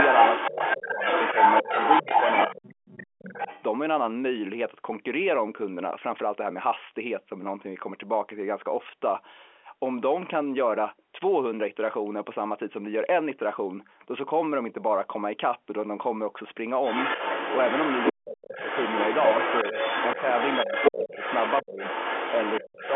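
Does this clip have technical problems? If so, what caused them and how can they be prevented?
Yes. The other side's voice leaking through is audible from 0 to 3.63 s, roughly as loud as the talker or a little louder, and again from 16.83 to 22.95 s, somewhat quieter. It's likely loudspeaker playback that the echo canceller didn't fully strip from the mic. A headset, or lower speaker volume, keeps the far end out of the microphone.

Speech suppressed in double talk shows up as the talker dropping away at 0.5–1.02, 1.62–3.35, 18.12–18.59, 19.71–19.77, 20.65–21.83 and 22.61–22.84 s. The dips range from about 10 dB to almost cut out, likely the canceller turning everything down while both sides talk at once. A headset, or a canceller with better double-talk handling, avoids it.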